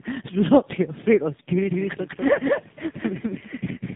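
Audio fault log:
Throughout: tandem speech coding. The speech passes through two low-rate speech coders in a row, GSM full rate at 13 kbit/s and then AMR-NB at 7.4 kbit/s, with a G.711 mu-law hop between them. The second coder re-encodes the first one's already damaged output, so the errors pile up. The speech sounds rough, muffled and warbly. A spectrogram shows nothing above 3.8 kHz, and the harmonics look smeared and unsteady from frame to frame.
1.71 s to end: doubled audio track. From 1.71 s to the end, a second full-band copy of the speech runs about 200 ms behind the first, at roughly 5 dB lower level. It comes in abruptly and has no decay or room colour, so it sounds like a hard, stuttering echo rather than reverberation. The likely cause is the same signal being captured a second time through a slower path. The waveform shows each syllable's envelope repeated a fifth of a second later and about 5 dB smaller.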